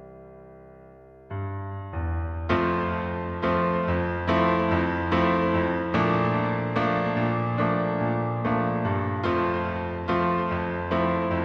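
No technical faults can be heard anywhere in the recording.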